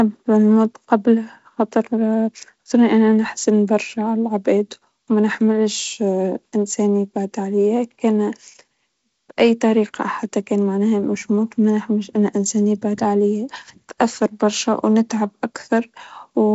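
Nothing stood out on listening to this speech, which carries the band-limited sound of G.722 wideband telephone coding, with nothing above about 7.7 kHz.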